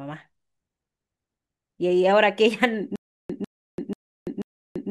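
At 2.96 s the speech breaks into a stutter with silent gaps that runs to the end: a 0.15 s fragment plays, then about 0.34 s of digital silence follows, and the cycle repeats four times every 0.49 s. This is likely a stalled player or stream replaying its last buffered piece on each retry and then running dry. On a waveform it shows as identical short blocks separated by flat silent stretches; a spectrogram shows repeated matching patches between empty columns.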